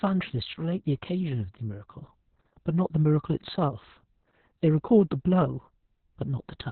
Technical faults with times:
0.00-6.71 Opus voice compression

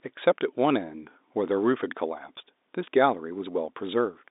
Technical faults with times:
none

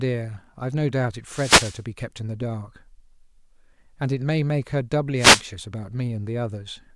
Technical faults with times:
1.29-1.82 wireless microphone noise hit
5.16-5.44 wireless microphone noise hit

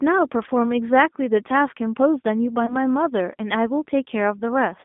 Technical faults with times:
0.00-4.85 G.729 codec
2.66-2.76 VoIP packet loss concealed by the speech codec

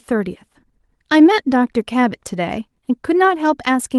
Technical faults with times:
none

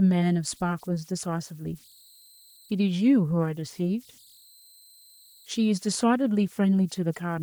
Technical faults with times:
0.00-7.42 converter idle tones

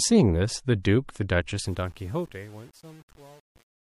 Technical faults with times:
0.83-0.85 pre-echo
1.60-3.90 truncation distortion on a fade

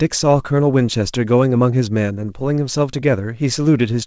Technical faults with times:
none

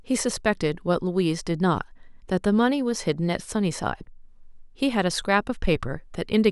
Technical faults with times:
none

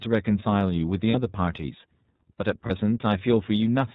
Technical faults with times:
0.00-3.95 iLBC codec
1.10-1.15 lost iLBC frames
2.66-2.71 lost iLBC frames

